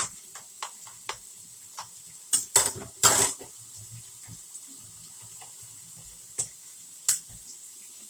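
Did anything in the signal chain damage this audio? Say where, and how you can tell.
Yes. Throughout the clip the sound turns grainy, rough and noisy on tonal parts, with little swirling and full bandwidth kept. That points to the codec stage, likely Opus compression in its CELT music mode at a low rate, roughly 24 kbps, filling starved bands with folded or noise content.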